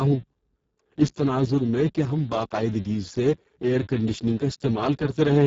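Speex codec damage runs throughout the speech, heavy enough to point to a very low setting near 6 kbps. With so few bits left for the excitation, the speech turns hoarse and noisy, and the band above 4 kHz is only shaped noise, ending near 7.7 kHz.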